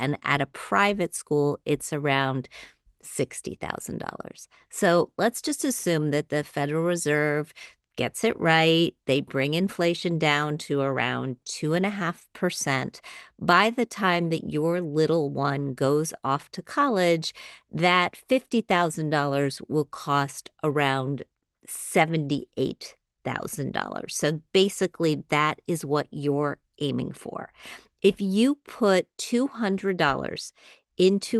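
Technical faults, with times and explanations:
No technical faults can be heard in this speech clip.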